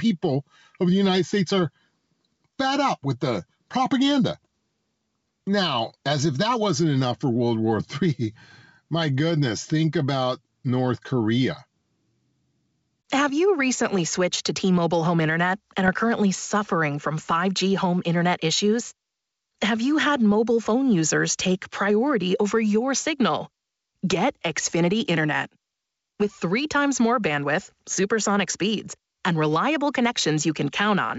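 Gain pumping runs through the whole clip. The background swells by about 5 dB in each pause, then ducks under every loud syllable. The likely cause is input gain set too high, with a fast limiter clamping each peak. Loud and soft passages sit squashed together.

Bit errors on an ADPCM link strike at 15.86 to 15.91 s and again at 28.45 to 28.51 s. Each is a short pop with a rough, gritty tail and a brief level jump. Flipped bits throw off the decoder's step size and predictor, so the damage rings on for tens of milliseconds. The wideband G.722 sound around these bursts stays clear up to about 7 kHz.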